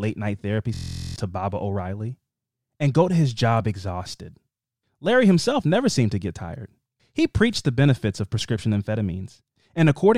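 From 0.74 to 1.16 s a system hang loop replays one frozen 23 ms buffer as a steady 43 Hz buzz, not a dropout's silence.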